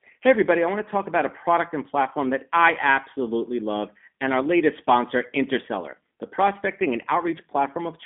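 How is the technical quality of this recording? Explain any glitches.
The speech has been squeezed through a narrowband low-rate codec, and the damage is plainly audible from start to finish.

Throughout, the G.729 codec (the G.729A variant) rebuilds each 10 ms frame from a vocal-tract filter, pitch predictor and a few pulses, which fits roughly 8 kbit/s. Speech sounds rough and slightly synthetic. A spectrogram shows energy only between 200 Hz and 3.5 kHz, with blank space above.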